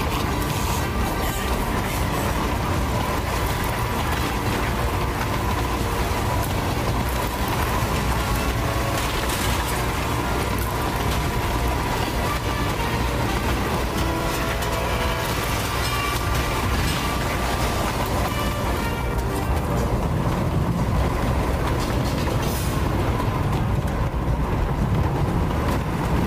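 From start to finish, the power line is leaking into the signal path, probably through a ground loop or a nearby transformer. The result is mains hum: a steady 60 Hz low tone with some low harmonics, sitting only around ten decibels below the sound itself.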